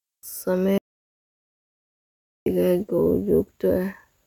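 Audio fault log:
0.78–2.46 s, audio dropout to silence: the speech cuts off abruptly in mid-flow and resumes just as abruptly about 1.7 s later, with the gap in between completely silent, no room tone or noise floor at all. That silence points to the input signal being lost while recording continued, most likely a momentary disconnection, failed link or accidental mute, so whatever was spoken during that stretch is simply absent.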